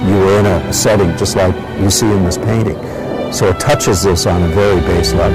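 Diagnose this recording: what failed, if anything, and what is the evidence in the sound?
Hard clipping runs through the whole recording: the signal overloaded a converter, number format or other stage by about 23 dB, so a large share of samples, roughly one in seven, hit that stage's limit and were sliced flat. Every loud passage carries harsh fuzz. The waveform shows squared-off plateaus, and the spectrogram shows dense harmonic smear reaching the top band.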